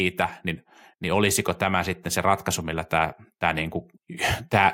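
Automatic gain rising from 1.01 to 3.71 s: the gain control judged the speech too quiet and lifted it by about 4 dB, swelling voice and background together.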